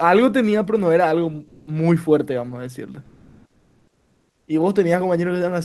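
From 1.47 to 1.67 s the real background in a pause gives way to comfort noise, a steady, featureless hiss with a level shift of about 4 dB. The likely cause is the sender's discontinuous transmission (Opus DTX): it stopped sending during the silence and the receiver filled the pause with synthetic noise. Right at the end of that stretch, from 1.63 to 1.67 s, there's an onset clipped by the voice detector. The speech comes back abruptly, missing its soft start, because the detector was likely slow to notice sound again, so those 40 ms were never sent and comfort noise covered them. The longer case runs from 3.05 to 4.47 s, where about 1.4 s of background is replaced by the same smooth comfort noise, this time with a much bigger level jump of about 14 dB, so the room detail just drops out until the audio resumes.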